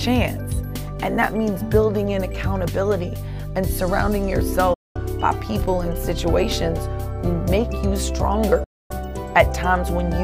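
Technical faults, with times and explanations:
4.74–4.97 s and 8.64–8.91 s: likely a Bluetooth dropout. The output goes silent for about 0.24 s and 0.27 s when wireless audio packets arrive too late and are discarded. Sound then resumes further along, as if it had kept playing. The waveform goes flat for the gap, and the spectrogram shows an empty vertical band across all frequencies.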